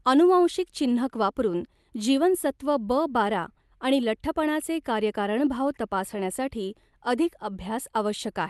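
A speech recording with nothing technically wrong in it.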